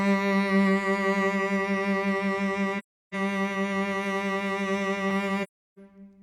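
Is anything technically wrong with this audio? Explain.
Yes. The music has two AAC frame loss with muting dropouts, from 2.78 to 3.15 s and from 5.43 to 5.79 s. Each gap lasts about 0.34 s, which fits roughly eight lost frames. The decoder zeroed their spectrum, so the music fades out, goes silent, then fades back in.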